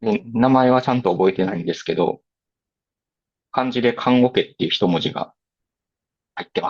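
No technical faults are audible.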